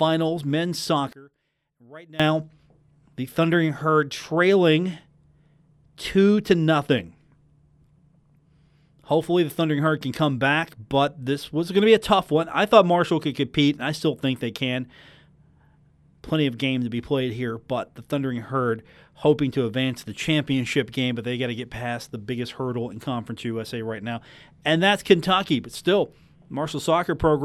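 Between 1.13 and 2.20 s, the likely cause is one channel inverted: reversed polarity on one side, so the centred speech largely cancels when the channels are summed to mono. The speech falls by about 23 dB to a faint trace, then returns at full level.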